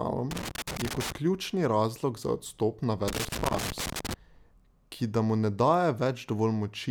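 A worn or dirty contact in the signal path is making and breaking as it shifts, causing loose connector crackle in this speech recording. The chopped signal produces irregular bursts of scratchy crackle from 0.31 to 1.16 s and again from 3.08 to 4.14 s.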